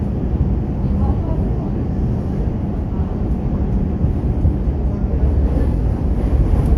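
Nothing in this recording stood out as a technical problem on listening.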